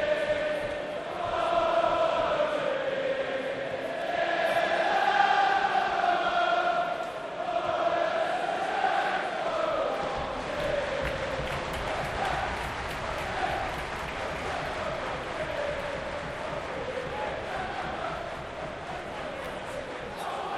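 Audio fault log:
1.15 s, 4.01 s and 19.45 s, repeated buffer: at each point the playback device ran short of fresh audio and played the previous 11.61 ms block a second time, which fits a 512-sample buffer, losing about 10 ms of sound. Because the repeat is so short, each one comes across as a brief click or buzz rather than an audible stutter. Unlike a dropout, there is no gap of silence, just the same sound played twice with a hard join.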